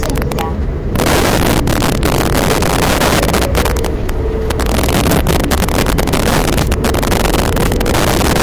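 From start to finish, the loud peaks have integer overflow: the level runs about 9 dB too hot, and a few percent of samples wrap to the opposite extreme, giving harsh cracks well beyond clipping.

The whole clip also stops dead at 14.2 kHz under a 192 kbit/s MP3, likely a low-bitrate Vorbis file saved at a high bitrate, so the old smearing and missing top remain.

Sample clock jitter runs throughout as well: the clock wobbles by a few microseconds, adding a gritty hiss around 30 dB below the signal that grows on loud, bright moments and disappears in quiet.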